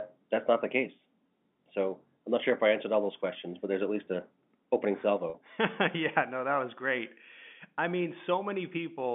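Just after "at least a opening", from 5.30 to 5.34 s, the sound briefly holds on a buzzy, slightly frozen tone. This is packet loss with pitch repetition: about 40 ms of audio went missing, which fits two 20 ms packets, and the receiver filled the gap by replaying the last pitch period.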